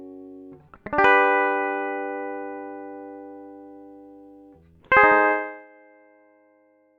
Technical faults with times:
5.31-5.67 zipper noise

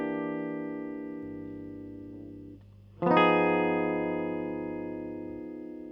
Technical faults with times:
1.23-5.40 mains hum

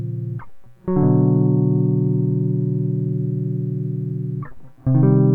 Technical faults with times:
none

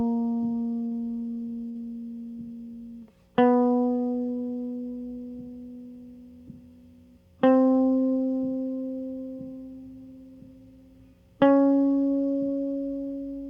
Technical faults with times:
0.85-0.94 burst of packet loss
1.69-1.78 burst of packet loss

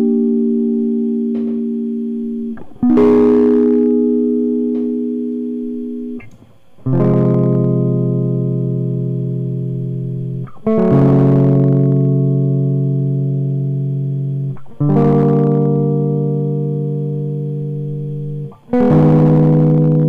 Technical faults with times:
2.90-3.91 hard clipping
6.93-7.65 hard clipping
10.67-12.05 hard clipping
14.90-15.76 hard clipping
18.74-20.03 hard clipping

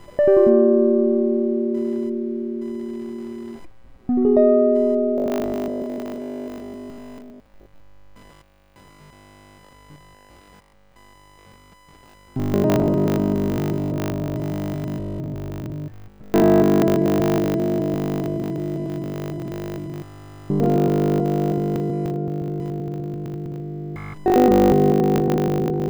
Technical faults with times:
0.00-25.89 computer activity noise
5.18-25.89 robotic sound from repeated short buffers

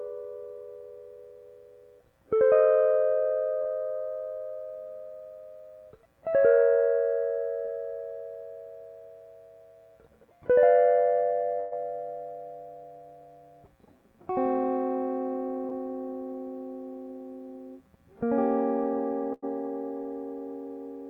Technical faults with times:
3.61-3.67 short concealed packet loss
7.65-7.70 short concealed packet loss
11.60-11.73 burst of packet loss
15.69-15.73 short concealed packet loss
19.33-19.44 burst of packet loss

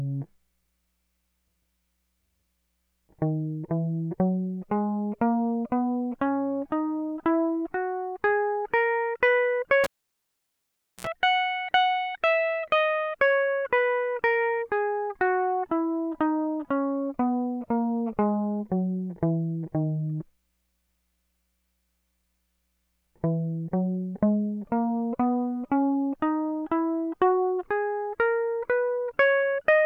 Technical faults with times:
9.84-11.07 cable pulled and plugged in

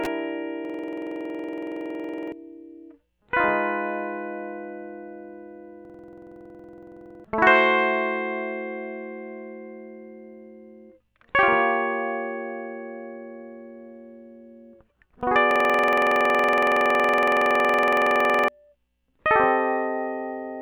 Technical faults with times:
0.65-2.32 system hang loop
5.85-7.24 system hang loop
15.51-18.48 system hang loop

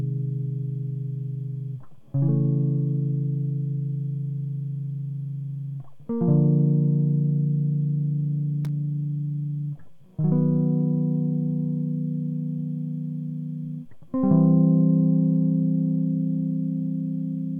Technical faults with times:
8.65-8.69 loose connector crackle

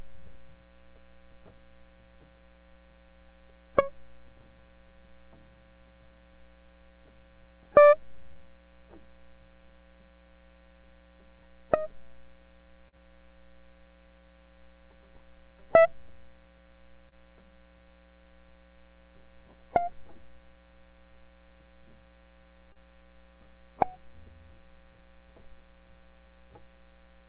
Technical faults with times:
8.33-8.38 short concealed packet loss
12.88-12.97 short concealed packet loss
17.09-17.14 short concealed packet loss
22.72-22.78 short concealed packet loss

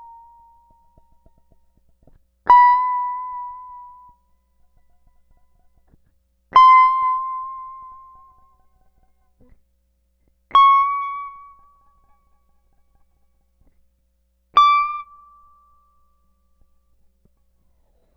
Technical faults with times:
none

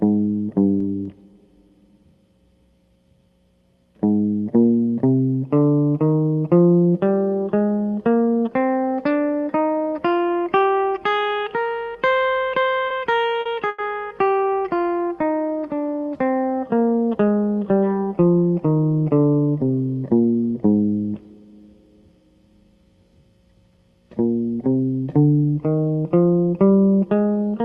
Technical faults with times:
12.87-13.80 repeated stalls (stutter)
18.29-18.81 jitter buffer speed-up

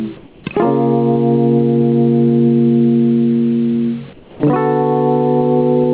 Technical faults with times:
0.00-5.93 gain pumping
0.17-0.44 comfort noise in place of the background
4.13-4.40 comfort noise in place of the background

